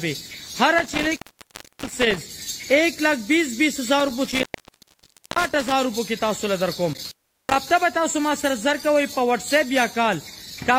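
Intermittent contact breaks the signal three times, at 0.78 to 2.21 s, 4.00 to 5.74 s and 6.93 to 7.67 s. A loose cable or plug loses its connection, opening the line for about 0.67 s, 0.93 s and 0.38 s. Each dropout cuts the sound to faint hiss, with crackle where contact breaks and returns. The waveform collapses to a thin noise floor bordered by sharp spikes, and the spectrogram shows pale gaps edged by vertical broadband streaks.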